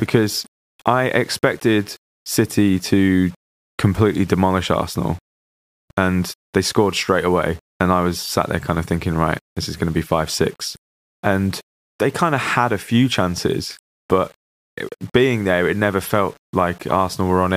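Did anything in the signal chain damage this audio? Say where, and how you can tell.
Yes: throughout the speech, quiet passages turn gritty and the quietest tails sputter or drop out. This is low bit depth without dither, likely from a sample-format conversion that rounded to about 7 bits. Unlike steady hiss, this grain follows the signal and disappears in silence.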